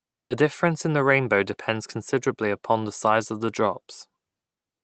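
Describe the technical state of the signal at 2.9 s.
At 2.9 s the speech is intact, carrying only the ordinary coding character of the call path, whose audio band stops at about 8 kHz.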